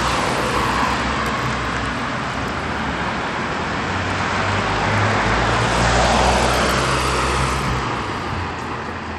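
Throughout, nothing sounds above 14.3 kHz, and a gritty, flickering haze rides on the audio. This is likely Bluetooth SBC compression at a low bitpool, around 96 kbps.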